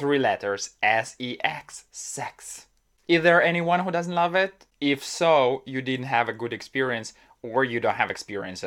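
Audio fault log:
Nothing to log here, as the speech comes through without a single fault turning up anywhere along the way.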